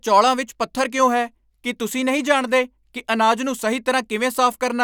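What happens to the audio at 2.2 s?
Nothing goes wrong at 2.2 s: the speech runs on intact through that moment, with no dropout, click or distortion.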